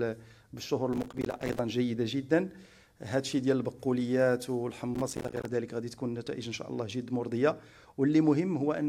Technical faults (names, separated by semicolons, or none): processor overload crackle